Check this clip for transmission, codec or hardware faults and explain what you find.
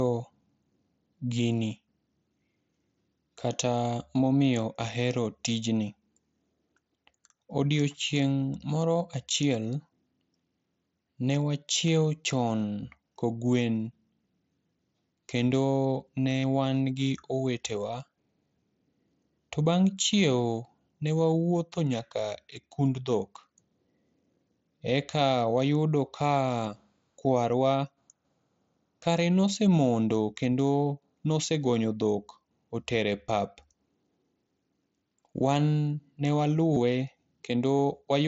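Brief concealed Bluetooth headset packet loss at 16.40–16.43, 33.27, 36.74–36.76 and 37.79 s, over the mSBC wideband link. The receiver bridges each gap of 15 to 30 ms with repeated recent waveform, heard as a buzzy hold at full level and a slight warble on resumption.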